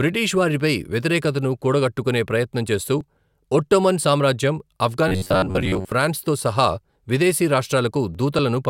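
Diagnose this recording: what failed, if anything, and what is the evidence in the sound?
Driver or buffer stage: from 5.08 to 5.89 s the speech collapses into a rigid metallic buzz at 93.8 Hz, the robotic sound from repeated short buffers. Most of that stretch is one roughly 10.7 ms block replayed, likely because audio arrived too late.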